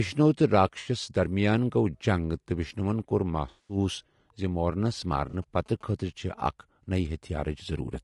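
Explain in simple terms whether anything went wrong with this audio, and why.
The speech sounds rough and grainy throughout, with a hiss between its tones and a dull, artificial top end. That is most likely low-delay AAC compression, which is steady damage rather than sudden dropouts.

AAC frame loss with concealment causes brief smeared, noisy patches at 0.79 to 0.88 s, 3.49 to 3.77 s (after "جنگ تہٕ وشنوَن کوٚر") and 5.29 to 5.35 s. The decoder guessed the missing sound instead of leaving silent gaps.

GSM signalling bursts sound like a faint galloping buzz from 5.19 to 5.91 s, right after "زِ مورنَس". A nearby mobile phone's radio is leaking into the audio, which is different from the codec's own faults.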